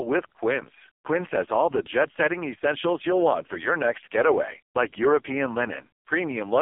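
The whole clip runs through the AMR narrowband mobile codec, probably its lowest 4.75 kbps mode. Everything's squeezed into roughly 250 Hz to 3.4 kHz, and the speech sounds buzzy and synthetic.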